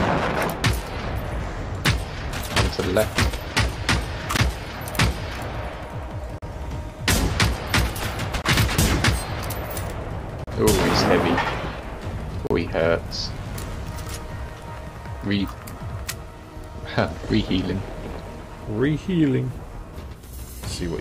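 Gaps between stream segments cut hard-edged silences at 4.37, 6.38, 8.42, 10.44, 12.47 and 14.50 s. Lasting 4 to 39 ms, they recur every 2 s, matching 2-second segment boundaries. Nothing is lost.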